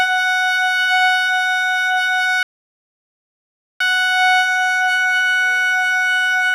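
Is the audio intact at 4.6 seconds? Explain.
No. At 4.6 seconds the music carries the same damage as the rest of the clip, most likely HE-AAC compression, consistent with a low rate near 24 kbps. The treble is rebuilt by copying lower bands upward, so its harmonics no longer line up and the highs sound gritty and metallic. On a spectrogram the top band looks smeared and blocky rather than finely detailed.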